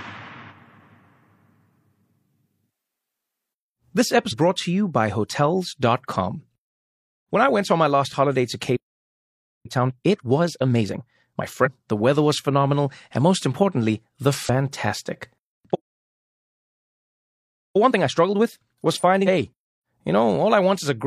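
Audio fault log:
4.28–4.34 s, compressed frames skipped: a brief smeared blip, then the speech resumes further on, with roughly 300 ms missing, about seven frames at 46.4 ms each. The join is soft, not a click, because adjacent frames overlap.
8.76–9.66 s, playback stall: the speech halts mid-flow and 0.88 s of silence follows before it continues from where it stopped. The likely cause is the player running out of buffered data or its thread being blocked.
9.66–11.42 s, time-compressed catch-up: right after "my last holiday to" the speech runs at 1.5× with its pitch unchanged. The player is cutting out small slices and cross-fading across them to work off the backlog left by the stall.
11.61–11.68 s, compressed frames skipped: just before "the weather was phenomenal" a short smeared blip marks a jump of about half a second, roughly ten 46.4 ms frames lost or rejected by the decoder.
14.45–14.49 s, compressed frames skipped: after "and most importantly the" the audio jumps ahead by about one second, around twenty frames. 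The join is again a soft blip from the overlapping frames, not a hard edge.
15.74–17.76 s, playback stall: a 2.0 s dropout to silence cuts the speech off mid-flow, and it then carries on from the same point. This likely comes from a buffer underrun or a blocked playback thread.
17.76–19.88 s, time-compressed catch-up: a milder hurried stretch at 1.15×, pitch preserved, as the player trims the backlog from the preceding stall.
19.23–19.28 s, compressed frames skipped: inside the catch-up stretch a smeared blip marks a jump of about one second, roughly twenty 46.4 ms frames missing from the playback.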